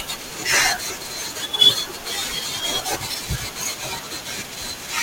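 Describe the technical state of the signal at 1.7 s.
A brief, loud burst of misplaced energy, heard as a chirp, squeak, blip or noise, cuts across the speech from 1.65 to 1.71 s, with the error peaking around -5 dBFS. It is a corrupt frame decoded: flipped bits in a few compressed frames made the decoder place energy at wrong frequencies.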